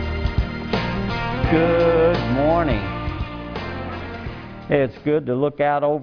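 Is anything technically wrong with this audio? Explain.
No, nothing is technically wrong.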